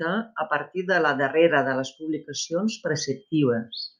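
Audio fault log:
1.63 s, dropped samples: the stream most likely lost about a single sample between "partir de la darrera" and "de les publicacions", so the waveform jumps straight to a later value. Far too brief to remove any sound, it leaves one sharp click.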